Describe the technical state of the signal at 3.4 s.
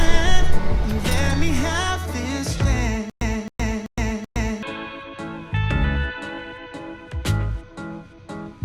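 At 3.4 s the audio is caught in a stutter with silent gaps: from 3.10 to 4.63 s a 267 ms burst repeats four times, each followed by 115 ms of dead silence. The likely cause is a stalled stream replaying its last fragment, so material in between is lost.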